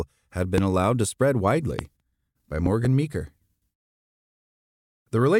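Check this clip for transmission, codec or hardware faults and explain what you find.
The speech has one hardware fault, heard three times: a loud pop. A sharp pop, roughly 15 dB above the speech, lands at 0.58 to 0.60 s, just before "allowed to spread", and again at 1.79 to 1.81 s, just after "allowed to spread". From 2.66 to 2.87 s a softer double pop follows, about 10 dB up. The speech carries on beneath each one. The likely cause is a sudden voltage pulse from a plug, switch, static or driver glitch.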